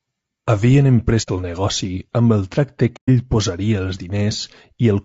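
A speech clip with plainly audible codec damage throughout. The voice sounds rough and grainy, likely from low-delay AAC compression at a low bitrate, around 32 kbps. AAC frame loss with muting leaves soft-edged silent gaps at 1.22 to 1.29 s and 2.96 to 3.10 s. These fit two and four lost frames, faded out and back in.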